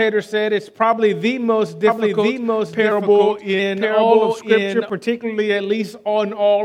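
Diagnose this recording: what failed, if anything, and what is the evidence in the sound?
From 1.87 s to 4.90 s a second, full-band copy of the sound runs roughly a second behind the original at about the same level. It has no decay or room colouring and starts and stops abruptly, which separates this doubled audio track from an echo or reverb tail. The likely cause is at the driver or buffer stage, or an edit, where the same audio was captured twice through paths out of step by about a second.

From 2.92 s to 3.59 s, playback slows by 6.28% and pitch drops 112 cents, just over a semitone, then snaps back to normal speed. Speed and pitch move together as one step, which separates this drift correction step from the gradual, wavering pitch of wow or flutter. The likely cause is clock-matching software in the driver or buffer stage that changed the rate in one jump to rebalance its buffer.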